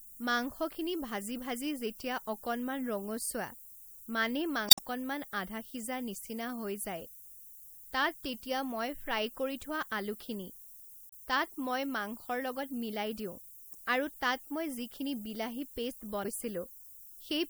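From start to finish the speech sits on a steady, thin hiss typical of low bit depth with noise shaping. The audio has been reduced to 8 bits, and the rounding error has been pushed upward in frequency, so the hiss grows sharply toward the top of the band and stays only about 15 dB below the speech. On a spectrogram this shows as a constant noise floor that brightens toward the highest frequencies. The waveform carries a fine fuzz even through pauses.

At 4.67 to 4.79 s comes the first and longest of four blips from damaged data in a compressed stream. The others are shorter, at 11.09 to 11.13 s, 13.71 to 13.75 s and 16.21 to 16.26 s. At each point the decoder has hit corrupted bytes, misread or discarded the frames there and lost sync while hunting for the next valid frame header. The result is a brief chirp, squawk, click or short hole that breaks into the speech. A spectrogram shows each one as a short, sharp-edged disturbance, and the waveform shows an abrupt discontinuity at its edges.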